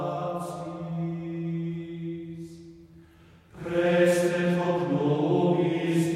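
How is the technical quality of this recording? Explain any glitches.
The recording has one glitch, a stretch of crude rate conversion from 1.15 to 2.82 s. The sample rate was changed by linear interpolation with no anti-imaging filter, which fits a 44.1 kHz to 48 kHz conversion. The leftover error, roughly 50 dB below the sound, forms inharmonic tones that give a faint gritty fizz tracking loud and high content. Unlike codec artefacts, it doesn't warble or smear; the grit stays fixed to the signal.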